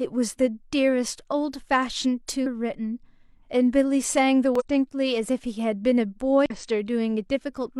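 A speech clip with damaged data in a compressed stream, heard as brief glitches at 2.42–2.47 s, 4.55–4.62 s and 6.46–6.52 s, where corrupted frames throw the decoder out of sync.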